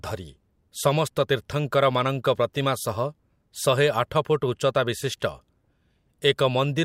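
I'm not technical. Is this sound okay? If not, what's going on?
Yes, nothing wrong turns up anywhere in this recording.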